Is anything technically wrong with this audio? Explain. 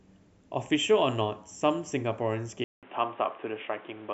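Yes. From 2.64 s, after a gap of about 0.19 s, the speech turns dull and boxy. This is likely an input switched to a poorer device. On a spectrogram, everything above 3.8 kHz disappears, a new noise floor appears about 30 dB down, and the waveform's level shifts by around 5 dB.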